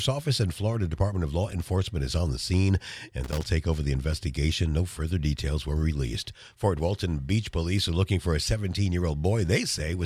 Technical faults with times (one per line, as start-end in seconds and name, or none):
3.24-3.42 loose connector crackle